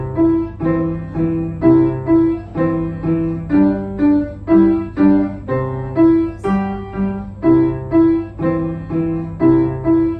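No technical faults are audible anywhere in the clip, so there is nothing to flag.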